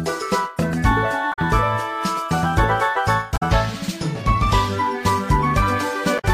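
Three short glitches show up, at about 1.29 to 1.39 s, 3.33 to 3.43 s and 6.15 to 6.25 s, each lasting roughly a tenth of a second. They're damaged data in the compressed stream: a patch of the encoded bytes is wrong, so the decoder misreads those frames, loses sync and hunts for the next valid frame header before it can carry on. You hear each one as a brief chirp, squawk, click or short hole cutting through the audio.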